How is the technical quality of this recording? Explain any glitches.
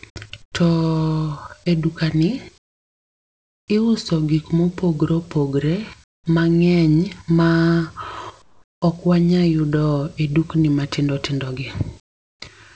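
The recording's background drops out in five pauses, replaced by comfort noise in place of the background: 0.42–0.54 s, 2.58–3.68 s, 6.04–6.26 s, 8.42–8.82 s, and 12.00–12.42 s after "e dukni matindotindogi". Each gap becomes steady, featureless hiss, about 10 to 26 dB quieter, likely from discontinuous transmission filling silence with synthetic noise. Nothing is heard above 8 kHz, consistent with a wideband call codec such as G.722.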